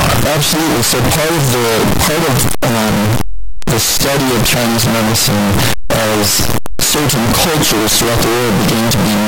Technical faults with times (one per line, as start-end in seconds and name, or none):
0.00-9.28 signed and unsigned mixed up